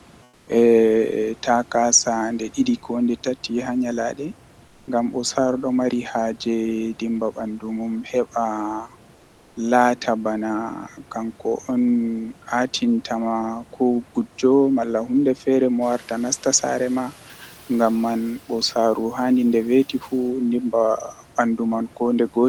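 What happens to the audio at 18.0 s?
At 18.0 s the noise suppressor is still catching up. The room noise jumps by about 19 dB near 16 s. The suppressor's noise estimate trails behind, so the noise passes through under-reduced from 15.81 s, then sinks by about 6 dB as it adapts by 18.25 s.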